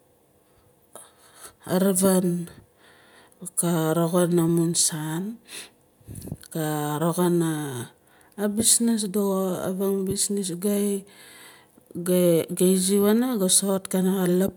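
No technical faults are audible anywhere in the speech.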